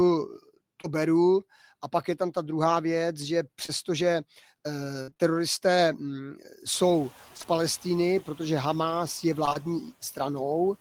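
Packets of this speech recording repeatedly failed to reach the decoder in time, causing short concealed packet loss at 0.81, 3.66, 7.37, 7.42, 9.45, 9.49 and 9.53 s. Each time roughly 20 ms of audio was missing, and the receiver bridged the hole by extending the preceding sound before fading back into the real signal. Each one is heard as a brief smear or wobble. There are two back-to-back losses near 7.4 s and a cluster around 9.5 s, and the 9.49 s patch runs a few milliseconds longer than the gap it covers. Between 5.02 and 5.21 s the losses come in quick succession, producing repeated packet loss with a robotic sound. Four gaps remove about 120 ms of audio in total, the longest 53 ms. With concealment filling well over half of that stretch, the patched pieces follow one another closely and the sound turns choppy and fragmented, with parts dropped out. Underneath, the room noise climbs by about 20 dB around 6.5 s but stays roughly 25 dB below the speech.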